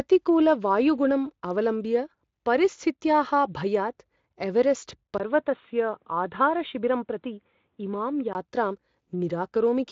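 After "अवलम्ब्य परिस्थित्याः भयात् एवेरेस्ट्", a 20 ms gap at 5.18 s precedes duller speech, cut above 3.8 kHz until 8.35 s, likely an input switched to a poorer device.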